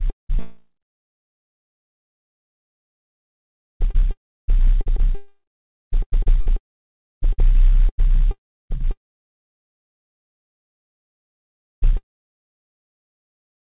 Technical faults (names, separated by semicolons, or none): sound chopped by the voice detector; long network dropout